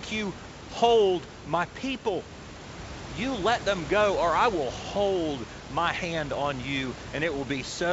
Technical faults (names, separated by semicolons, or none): none